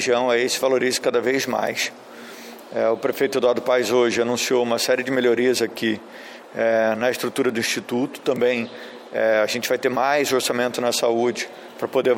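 Three bit error spikes occur, at 1.67 s, 7.49 s and 8.36 s, each a single corrupted sample peaking around -13, -19 and -13 dBFS. A flipped bit throws one sample's value off by a power of two before the next sample returns to normal, so each is heard as one dry, full-band tick. Unlike a dropout click, nothing goes missing around it, and unlike clipping it has no link to the loudness or shape of the surrounding sound.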